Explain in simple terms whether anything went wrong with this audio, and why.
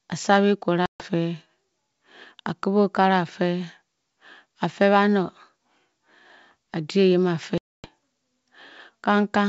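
Two dropouts from packet loss on an ADPCM call break up the speech, at 0.86 to 1.06 s and at 7.58 to 7.89 s. About 140 ms of audio goes missing in the first and 260 ms in the second. That points to a handful of packets lost, then over a dozen. The gaps are filled with abrupt silence. Because the decoder rebuilds each sample from its own running estimate, it falls out of step with the sender during the gap. The speech then comes back briefly off-level or slightly distorted before settling.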